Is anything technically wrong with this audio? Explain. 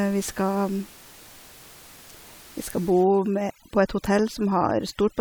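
Yes. From 3.04 s to the end of the clip at 5.2 s there is overdone noise removal. A noise reduction stage is working far too hard here. It pushes individual frequency bands down or out whenever they sit close to its noise estimate. Quieter parts of the speech get caught and removed with them. The background drops and breaks up into twinkling specks. Before 3.04 s the room noise sits about 24 dB below the speech.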